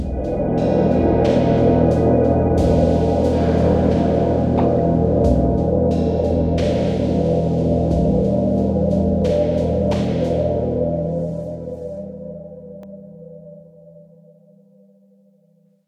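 At 12.83 s, new audio failed to reach the playback device in time, so it played its last buffer a second time, a repeated buffer. That buffer is only about 1.33 ms long, which fits a 64-sample buffer, so the doubled piece is far too short to register as a stutter. Instead it comes through as a single brief click where the hard joins land, with roughly a millisecond and a half of audio missing from the flow.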